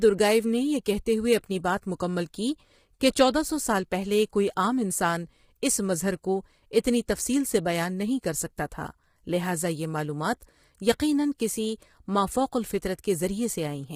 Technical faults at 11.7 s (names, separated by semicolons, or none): low-delay AAC compression